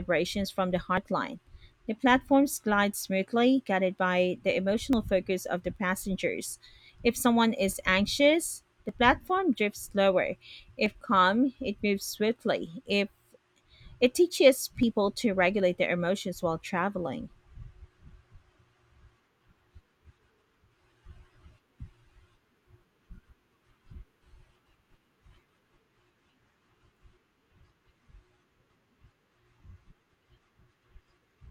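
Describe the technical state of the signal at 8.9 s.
At 8.89 s there is an overlap between stream segments: the two-second segments' time stamps overlap, so a short stretch of speech is discarded and the waveform jumps, producing a tiny skip.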